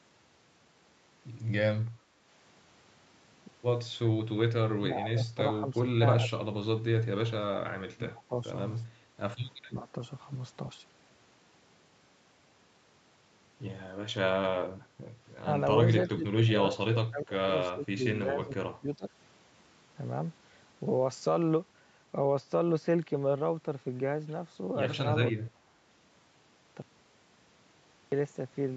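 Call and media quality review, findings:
Background gated by the echo canceller: brief room-tone dips of about 6 dB at 2.12–2.16 s and 9.00–9.17 s. AEC suppressor clamping the mic while far-end audio plays, then releasing. Short, shallow background ducking.

Speech suppressed in double talk: near-end speech dips at 4.78–8.46 s (about 3 s affected, down roughly 25 dB), 9.67–9.95 s (about 15 dB), 15.84–19.08 s (about 2 s, roughly 25 dB) and 25.38–25.53 s. Likely the AEC treating overlapping talk as echo and attenuating it.

Audio dropout to silence: hard cut to silence at 26.82 s, back at 28.12 s, so 1.3 s gone with no room tone. Likely input loss upstream (device drop, link failure or mute) while the encoder kept writing silence.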